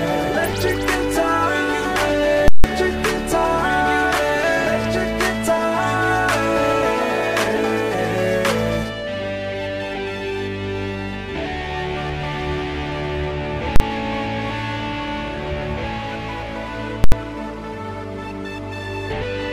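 At 2.48 to 2.64 s, 13.76 to 13.80 s and 17.04 to 17.12 s, invalid numbers at full scale: a calculation produced infinite or invalid values that clipped to the extreme sample value. The 160 ms block gives loud pops at both ends with nothing audible between; the 40 and 80 ms blocks collapse into single bangs.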